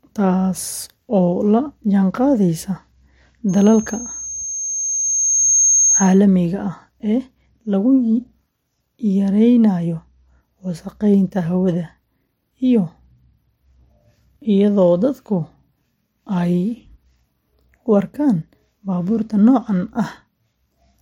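A speech clip with loudspeaker feedback squeal from 3.49 to 6.19 s: a 6.4 kHz tone builds over roughly two seconds to about 5 dB above the speech, ending just before "ah ee lagu". On a spectrogram it shows as a bright horizontal line that thickens as it swells.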